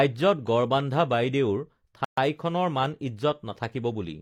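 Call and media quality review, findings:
Gap at a join of encoded pieces, 2.05–2.18 s: about 130 ms silence cutting into speech, edges smeared. Separately encoded segments joined untrimmed; encoder delay and last-frame padding retained. Repeats every 4.0 s.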